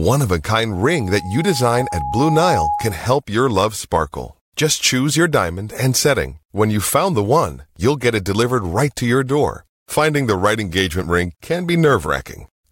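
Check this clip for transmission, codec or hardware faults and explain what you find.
One hardware fault stands out: loudspeaker feedback squeal from 0.71 to 3.10 s, starting after "of a" and cut off before "your love sparkle". The microphone is picking up its own loudspeaker, and the loop gain has crept above one at 829 Hz. That single tone feeds on itself, swelling over roughly two seconds into a sustained squeal about as loud as the speech.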